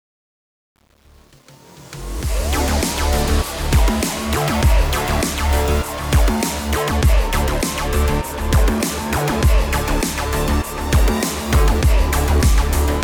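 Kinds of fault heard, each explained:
Truncation distortion on a fade: The fade-in keeps about 8 bits without dither, so the quiet start, 0 to 2.13 s, sounds gritty and stepped.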